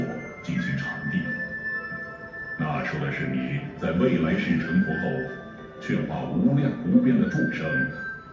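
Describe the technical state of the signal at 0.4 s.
At 0.4 s the signal is intact, with no audible fault.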